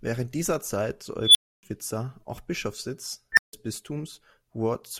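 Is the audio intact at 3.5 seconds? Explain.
No. An unstable filter runs from 3.32 to 3.53 s: a recursive filter's output grows without bound, so a tone around 2 kHz swells into a loud squeal within about 51 ms and clips, then collapses into 160 ms of silence. On a spectrogram it shows as a bright horizontal band, and on the waveform as an exploding envelope before a flat gap.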